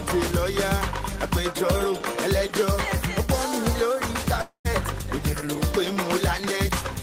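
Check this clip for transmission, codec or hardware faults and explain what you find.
One fault is present: a long network dropout between 4.41 and 4.67 s. The audio breaks off and the receiver holds the last sound for about 233 ms as a decaying buzz or hiss, which thins out into near-silence, about 110 ms of that stretch being silent. When the audio resumes, about 240 ms of material is simply absent, so the sound jumps forward. The likely cause is a run of consecutive packets lost in transit, with the receiver's concealment stretching the final received audio until it gave up and muted.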